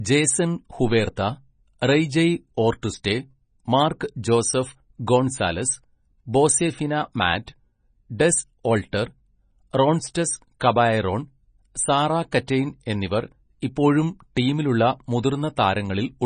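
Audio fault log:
throughout: MP3 compression, heavy. The speech has nothing above 9.4 kHz, so the top end is simply cut off, and the remaining detail has a watery, swirling quality where weak frequency components drop in and out from frame to frame. S sounds come through metallic and chirpy, and consonant onsets lose their edge. The depth of the damage points to a very low bitrate, on the order of 24 kbps, and a likely cause is a starved MP3 encode forcing a low treble cut-off and discarding quiet spectral lines.
1.16 s and 12.47 s: pre-echo. At each point, a short burst of hiss leads a sharp attack by roughly 13 to 14 ms, and the onset itself sounds softened. The second one lands just before "എന്നിവർ ഇപ്പോഴും". Here the codec has spread quantisation noise across a full transform block, so noise scaled to the loud attack also fills the quiet gap ahead of it.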